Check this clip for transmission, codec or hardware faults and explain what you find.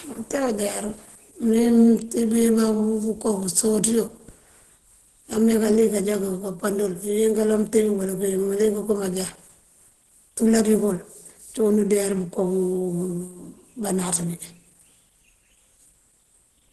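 One fault is present, and it lasts the whole clip: Opus compression, plainly audible. The speech sounds muffled and hoarse, with grainy, noisy edges. This likely comes from Opus running in its hybrid speech mode at a low bitrate, which fits roughly 16 kbps. In that mode the encoder narrows the bandwidth and only approximates the upper detail. On a spectrogram, nothing appears above 12.1 kHz, and the upper bands look smeared and noisy instead of cleanly harmonic.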